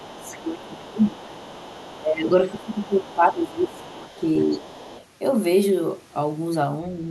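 Speech, and two echo-canceller problems run through most of it. The first is the other side's voice leaking through. A second talker sits roughly 25 dB under the main speech from 0.0 to 0.44 s, 0.65 to 1.97 s, 2.58 to 3.14 s and 3.7 to 5.05 s, plus a brief, fainter scrap around 30 dB down at 3.44 to 3.51 s. That's most likely far-end audio from the talker's loudspeaker getting back into the mic, with the canceller only partly removing it. The second is speech suppressed in double talk. The main voice gets pushed down by up to about 15 dB from 0.0 to 1.41 s and 1.97 to 4.25 s, then dips by around 10 dB at 4.41 to 4.66 s. The likely cause is the canceller failing to separate the near talker from the echo when both are present and turning the whole signal down.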